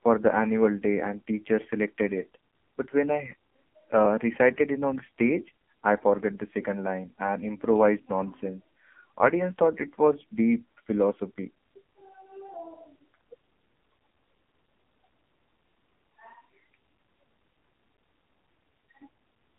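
From start to end, the speech carries AMR narrowband mobile codec damage. The band runs from about 200 Hz to 3.4 kHz. Heavy vocal-tract modelling with sparse pulses makes the voice buzzy and synthetic. That fits a low rate near 5.9 kbps.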